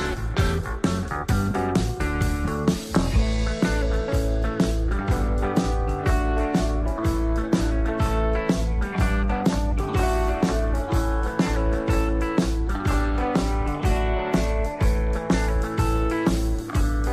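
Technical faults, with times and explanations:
No technical faults can be heard anywhere in this clip.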